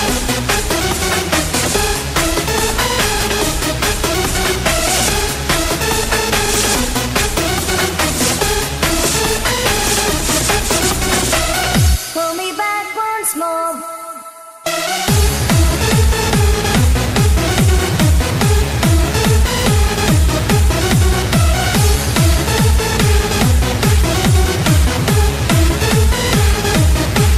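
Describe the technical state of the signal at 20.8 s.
At 20.8 s the sound is dull and lacks top end, with a gurgling, granular grain, as it has throughout the clip. The likely cause is MP2 compression at a starved rate, around 80 kbps by ear, switching upper sub-bands off and coarsely quantising those left.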